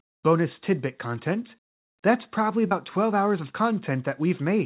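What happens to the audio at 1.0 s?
Nothing goes wrong at 1.0 s: the speech there passes through the call path intact, with no dropout, glitch or distortion, just the narrow telephone band that comes from G.711 mu-law coding, with nothing above 4 kHz.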